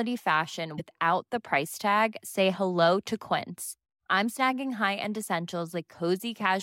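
Speech with a brief glitch from about 0.75 to 0.80 s, just before "the price tag": damaged data in a compressed stream, where the decoder misreads corrupted frames and loses sync.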